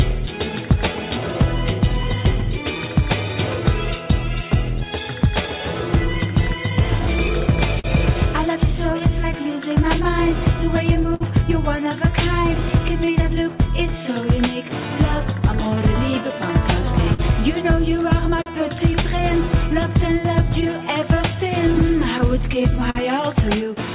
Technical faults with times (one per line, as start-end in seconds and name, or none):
0.00-23.95 clock drift between sender and receiver
0.09-22.63 repeated timing corrections
7.27-9.02 scattered short gaps
11.14-11.22 short stall from a late packet
16.81-18.48 scattered short gaps
20.68-22.97 scattered short gaps